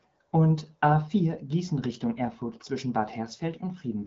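No technical faults can be heard in this speech, which is carried over an AMR wideband (HD Voice) link at 12.65 kbit/s.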